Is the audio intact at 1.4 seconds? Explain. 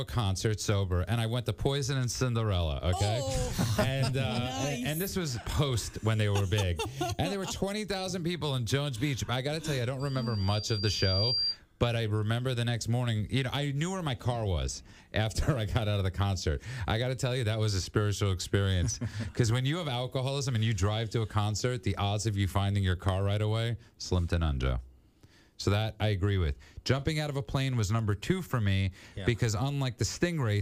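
Yes, the audio is intact at 1.4 seconds, with no dropout, click, distortion or other fault at that moment.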